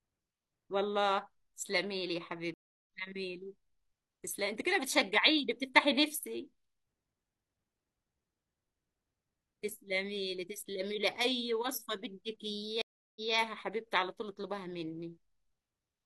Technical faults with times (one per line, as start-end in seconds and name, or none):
2.54-2.87 stream reconnect
12.82-13.33 stream reconnect